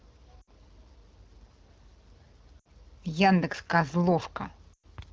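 Lost AMR speech frames occur at 0.41 to 0.51 s, 2.59 to 2.67 s and 4.73 to 4.86 s. Frames failed their checksum, so the decoder reused the last good pitch and vocal tract settings at falling gain. In the first two gaps about 60 ms of speech is filled in, dropping to near silence within two frames. The last covers about 100 ms and sinks further toward silence before speech returns, briefly weak or rough, through the wideband coding's light, clear rendering.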